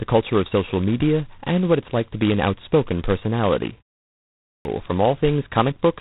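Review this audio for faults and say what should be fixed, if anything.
The G.726 ADPCM codec is running in its coarse 16 kbit/s mode, coding each sample as only a few bits of difference from a prediction. That leaves a harsh, rasping hiss riding on the speech throughout, and nothing above 3.9 kHz survives. Use 32 kbit/s or a wideband codec to prevent it.

A clipped start after a pause follows "be an outspoken personality": after a 0.53 s silence, the output device had gone to sleep and needed time to wake. The first 0.38 s of sound, from 4.27 s to 4.65 s, is swallowed, so the speech resumes abruptly without its opening. Keep the output stream open through silences to prevent it.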